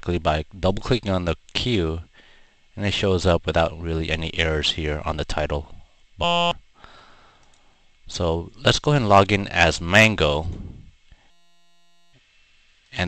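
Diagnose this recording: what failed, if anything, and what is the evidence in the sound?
A system hang loop at the driver/buffer stage: 6.24–6.51 s and 11.31–12.13 s buzz at 172 Hz, a 5.8 ms slice repeating, which fits a stalled 256-sample buffer.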